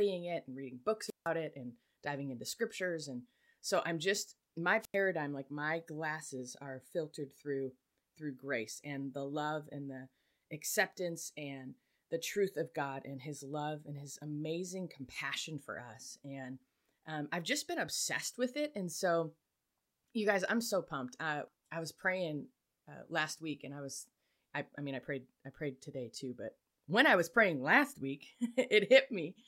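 At 1.05 s the speech breaks up with a wireless microphone squelch dropout lasting until 1.29 s. Hiss rises briefly. Then the output falls to near silence for about 159 ms before the speech returns. The radio signal from the FM transmitter faded too far. The receiver's squelch gate shut to avoid passing raw static. The same fault returns at 4.80 s, running to 4.96 s, with a shorter hole of about 90 ms.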